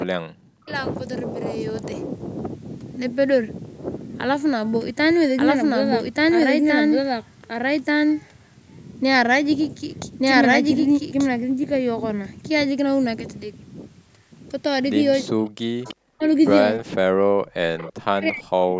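At 0.05–0.74 s and again at 15.23–15.88 s the speech is pushed down by around 40 dB and nearly vanishes. This is speech suppressed in double talk, likely an echo canceller ducking the near talker while the far side also speaks.

Two short echo leaks follow at 15.84–15.96 s and 17.77–17.93 s. A faint copy of the speech returns 331 ms late, about 20 dB below the main level. The cause is probably residual loudspeaker pickup that the canceller did not remove.

The suppression recurs at 16.09–16.22 s, 16.79–17.45 s and from 18.02 s to the end, with the same deep dips.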